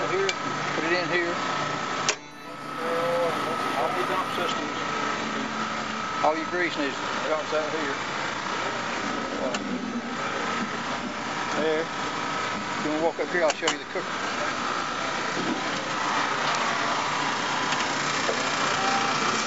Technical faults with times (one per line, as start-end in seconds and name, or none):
2.31-4.49 imaging from linear upsampling